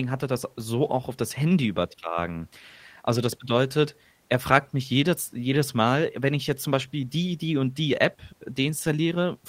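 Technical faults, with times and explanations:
Nothing technical to flag here, as the speech comes through with no faults worth listing.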